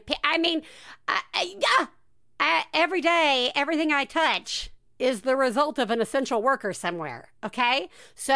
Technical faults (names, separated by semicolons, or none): none